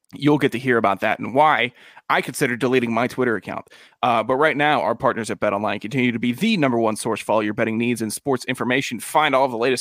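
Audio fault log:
No fault is heard in this speech clip.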